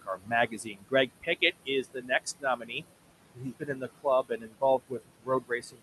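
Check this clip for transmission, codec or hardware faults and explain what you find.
Two processing faults are present, both from the noise suppressor; the room noise sits about 13 dB below the speech and is not a system fault.

Noise suppressor artifacts run throughout: bands judged to be steady noise are pulled down by about 20 dB frame by frame, so the noise sinks between phrases and rises under the words.

Speech cut by the noise suppressor occurs at 0.02–1.42 s, 1.65–2.84 s, 3.34–4.06 s, 4.23–4.62 s and 4.78–5.83 s. The suppressor mistakes quiet speech for noise and drops it by about 20 to 22 dB, so consonants and word endings sound swallowed, totalling roughly 700, 500, 400 and 300 ms in the first four stretches.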